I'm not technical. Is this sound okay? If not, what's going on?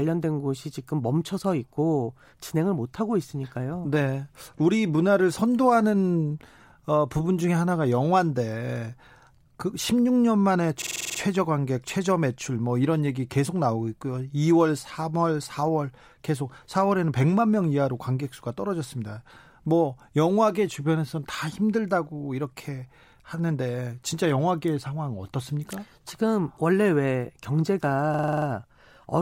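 No, there are two brief glitches. At 10.82 to 11.19 s and again at 28.14 to 28.47 s there's a system hang loop: the computer briefly froze, so the sound card replayed the same 46 ms snippet over and over, about 21 times a second, giving a short machine-gun stutter in the speech.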